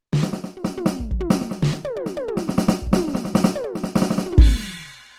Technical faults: Opus compression

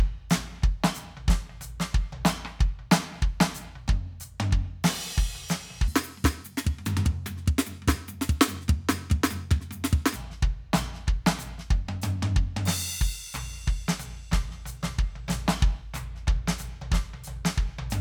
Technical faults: section at the wrong speed

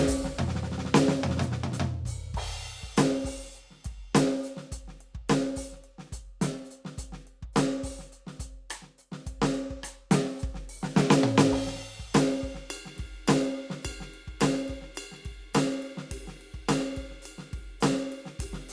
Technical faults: none

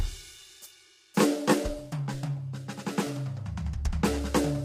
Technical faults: low-delay AAC compression

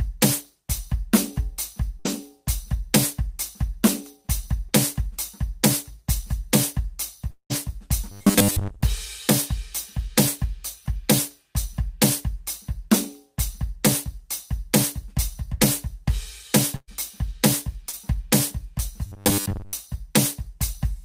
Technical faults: burst of packet loss; short concealed packet loss; long network dropout; robotic sound from repeated short buffers

